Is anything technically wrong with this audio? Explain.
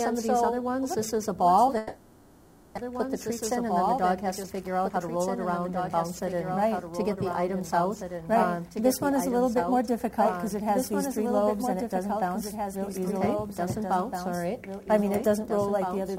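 Yes, there are three problems.

A doubled audio track runs through the whole clip: a second, full-band copy trails about two seconds behind at roughly 5 dB down, with no room colour. That's likely the same audio captured again by a slower path and mixed back in.

From 1.77 to 2.79 s there's a long network dropout, likely from packets simply not arriving. The receiver papers over about a second by stretching the last sound into a fading buzz, and roughly 0.6 s of audio never comes back when it resumes.

Then from 4.43 to 8.70 s a jitter buffer speed-up kicks in. After the backlog, the receiver trims tiny pitch-period slices over and over, dropping something like 0.4 s in total. The sound plays about 9% fast at unchanged pitch, so it feels rushed.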